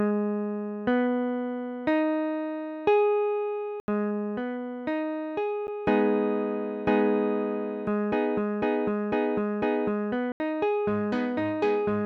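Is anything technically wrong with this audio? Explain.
Yes, there are three blocks of digital silence, at 3.80 to 3.88 s (80 ms), at 5.67 s (about 10 ms) and at 10.32 to 10.40 s (80 ms). In each, a run of samples was replaced by zeros, as when an output buffer isn't filled in time. The sound cuts off and resumes abruptly. The 80 ms blocks are heard as short holes, and the shorter one as a tick. On a waveform they show as flat lines near zero. On a spectrogram they show as blank vertical gaps.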